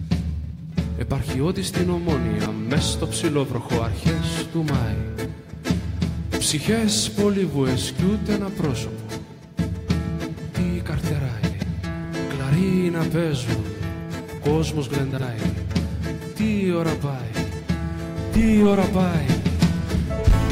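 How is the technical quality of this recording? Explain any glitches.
The recording has two short glitches, both from frames out of order. At 11.43–11.63 s and again at 15.12–15.22 s, two adjacent blocks of frames (about 93 ms each, then about 46 ms each) were decoded in swapped order. Each stretch plays with its halves exchanged: a brief garbled flutter, and no time lost.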